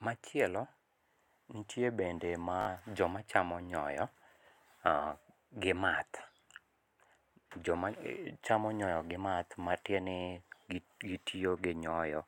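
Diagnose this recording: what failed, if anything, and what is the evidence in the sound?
Bluetooth stutter at 2.61 to 2.67 s, in the wireless link. About 56 ms of speech was lost while the receiver replayed a short slice, heard as a brief machine-gun buzz that fits about three lost packets. The speech resumes further on, as though it had continued underneath.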